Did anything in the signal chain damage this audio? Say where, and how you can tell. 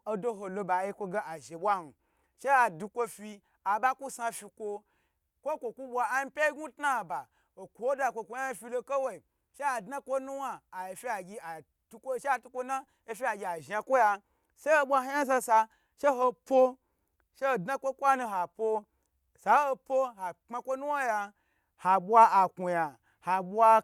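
No, nothing in the signal chain damaged this speech.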